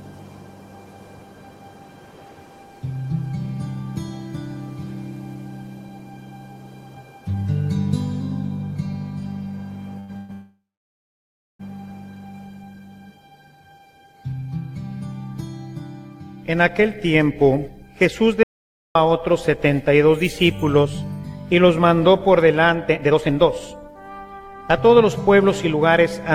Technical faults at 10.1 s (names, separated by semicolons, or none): short stall from a late packet; call audio freeze